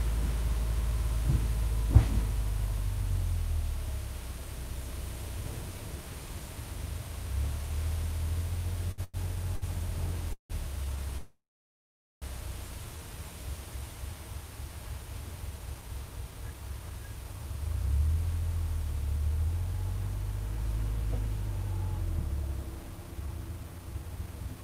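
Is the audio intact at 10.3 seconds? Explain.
No. Repeated stalls (stutter) run from 8.91 to 10.52 s. The buffer ran empty four times, and the last sound was stretched over gaps up to 170 ms, so the audio drags and stutters. A jitter buffer slow-down also spans 9.74 to 10.97 s. Repeated short cycles add 41 ms, so the sound plays at 97% speed with unchanged pitch and drawn-out tails.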